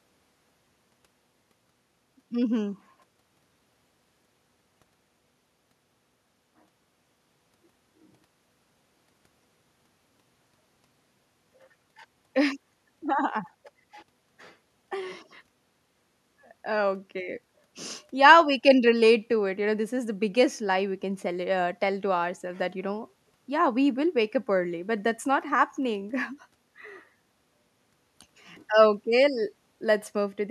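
No technical faults turn up anywhere in the speech recording. There is nothing to place on a timeline and nothing to explain.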